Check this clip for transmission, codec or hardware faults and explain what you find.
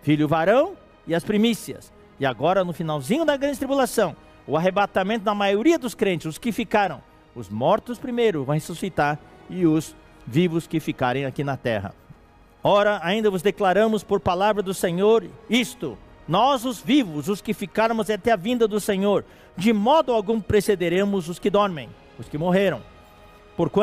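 Nothing in the sound here points to any transmission, codec or hardware trouble, so there's nothing to flag.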